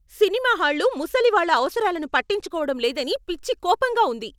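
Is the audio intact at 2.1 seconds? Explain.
No. A Bluetooth SBC bit pool drop runs from 0.6 to 2.49 s. Starved of bits, the treble dulls and gritty noise rises, as if around 108 kbps.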